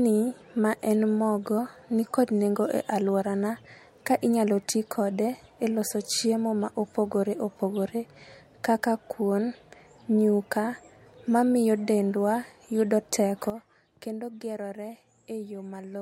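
It's a speech clip, and the problem shows up at 13.5 s, right after "mamiyo dendwa yudo": a sudden gain jump where everything drops by about 12 dB in one step and stays down through the end. The speech and the background noise fall together, which points to the digital gain itself rather than the talker. The likely cause is a level setting or bit shift applied instantly instead of being ramped in.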